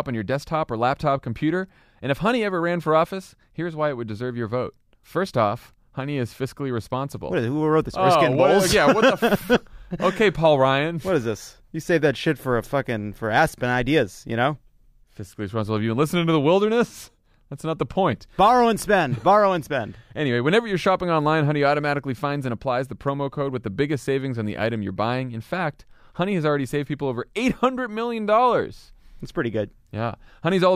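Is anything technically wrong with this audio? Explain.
No, nothing here stands out as a technical problem; it all sounds as it should.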